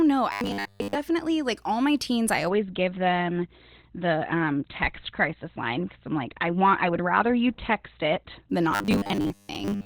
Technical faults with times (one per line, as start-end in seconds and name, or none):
0.32-0.95 robotic sound from repeated short buffers
2.50-8.50 adaptive stream at a lower bitrate
8.71-9.85 robotic sound from repeated short buffers